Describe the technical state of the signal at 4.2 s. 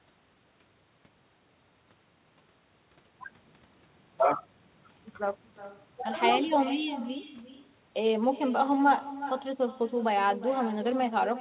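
At 4.2 s you're hearing echo with no canceller, and it's there for the whole clip, not just at that moment. The far end is playing the speech over a loudspeaker, its mic picks it up, and nothing strips it out, so the voice comes back roughly 0.4 s later at about 15 dB down. It sounds like a faint, hollow shadow trailing each phrase. The band stops at 4 kHz, which points to a narrowband call codec.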